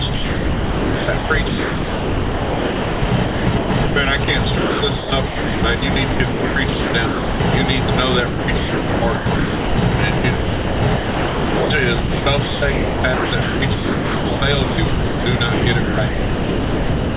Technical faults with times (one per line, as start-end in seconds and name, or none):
0.14-3.96 sound chopped by the voice detector
4.24-7.40 sound chopped by the voice detector
7.84-7.88 sound dropped by the voice detector
8.28-9.78 sound chopped by the voice detector
10.18-11.70 sound chopped by the voice detector
12.00-17.16 sound chopped by the voice detector